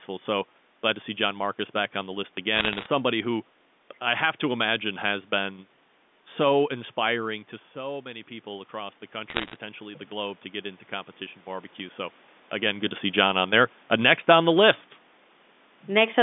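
Bit errors on a digital phone line hit from 2.56 to 2.86 s, between "back on the list" and "somebody who i have". Flipped bits in the 8-bit logarithmic G.711 samples each corrupt a single sample. Errors landing on the sign or upper bits jump that sample far from its true value, so the stretch carries a burst of sharp ticks and crackle laid over the speech. The density suggests an error rate of around one percent.

Automatic gain rising runs from 7.74 to 12.07 s, between "been so inspiring to" and "again good to see". Around 7 s the talker moves back and the input falls by about 11 dB. The gain control registers the quieter level and raises its gain by about 7 dB over those four seconds. Voice and room noise swell together, recovering only part of the lost level. Near 12.5 s the talker shifts again.

Bit errors on a digital phone line strike again from 9.30 to 9.56 s, inside the gain rise. 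This shorter burst of ticking crackle is somewhat sparser than the first, which fits an error rate a little under one percent. Again, single corrupted samples produce sharp clicks over the speech wherever a high-order or sign bit flips.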